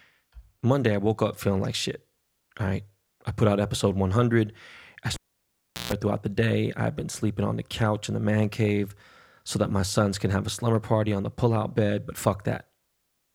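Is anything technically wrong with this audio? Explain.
Yes, there's a cable pulled and plugged in from 5.14 to 5.92 s. A pop, about 0.74 s of near silence, then a 0.14 s burst of 60 Hz mains buzz as the plug's tip touches first, and another pop before "throughout the day I've".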